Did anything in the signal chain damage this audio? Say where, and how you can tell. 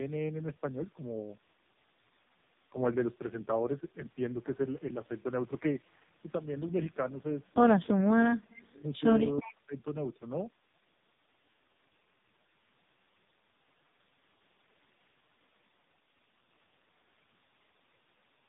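Yes. At the codec stage, AMR narrowband mobile codec damage runs throughout: nothing above 3.8 kHz, and heavily buzzy, synthetic speech that fits its lowest 4.75 kbps mode.

In call processing, the speech drops deeply, by about 30 to 35 dB, from 7.91 to 9.0 s and from 9.42 to 9.75 s. This is likely speech suppressed in double talk, with the echo canceller ducking the near talker.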